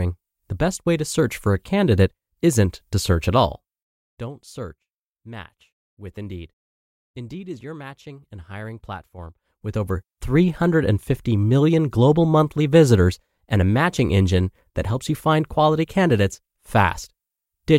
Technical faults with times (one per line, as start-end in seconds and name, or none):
none